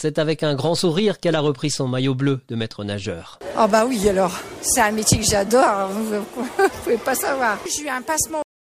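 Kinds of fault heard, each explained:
Cut-off end: at 8.42 s the sound stops mid-event because its final buffers were never written, leaving digital silence for the last 0.34 s. The waveform falls straight to a flat line with no decay, and the spectrogram shows a sharp vertical edge, then blankness.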